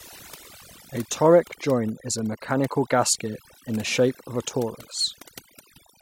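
Overdone noise removal runs through the whole speech clip. The reduction is set too strong, so frequency bands near the estimated noise level are cut almost to nothing, taking quiet voice detail with them. Pauses drop to near silence with twinkling specks.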